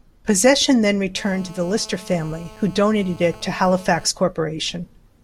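From 1.17 to 4.07 s, GSM phone buzz: a nearby handset's 217 Hz call bursts get rectified, giving a steady raspy buzz about 23 dB down, harsher than 50/60 Hz hum.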